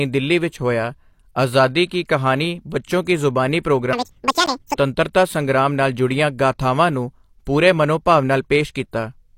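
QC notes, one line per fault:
3.93 to 4.77 s, section at the wrong speed: the speech runs at twice its recorded rate, so it sounds hurried and chipmunk-like, with pitch raised by roughly ten semitones. The likely cause is an edit or playback step that applied the wrong clock to this stretch. Pitch and tempo jump together at both boundaries, which separates this from a pitch-shift effect or from a speaker simply talking faster, where the voice's register would stay put.
4.46 s, gap between stream segments: a hard-edged hole of about 13 ms interrupts the sound inside the sped-up stretch. It fits a timing mismatch at a join between 2-second stream segments, where the player fills the missing time with silence. No audio is missing: everything after it is pushed about 13 ms later. That separates it from a packet dropout, where content vanishes, and from a click, which adds energy instead of cutting it.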